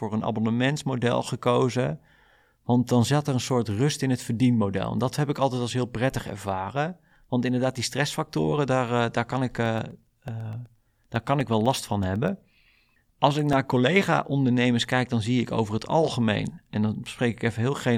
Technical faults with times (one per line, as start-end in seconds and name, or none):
9.66-13.53 periodic USB or driver dropouts